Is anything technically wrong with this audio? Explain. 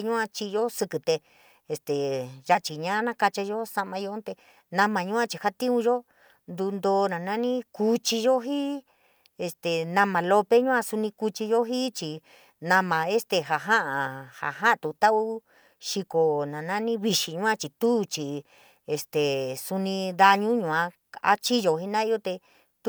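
No technical faults are audible.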